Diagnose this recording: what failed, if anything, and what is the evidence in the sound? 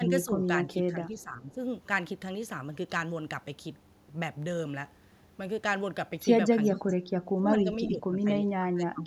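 In call processing, speech suppressed in double talk: the echo canceller likely ducked the talker, dropping speech by up to about 20 dB at 0–0.28, 0.46–1.58, 6.78–7.04, 7.37–7.67, 7.88–8.3 and 8.56–9.07 s.

Echo leak, also in call processing: the far-end canceller likely passed loudspeaker pickup back, so a faint copy about 25 dB down returns 427 ms late at 6.63–6.8 s.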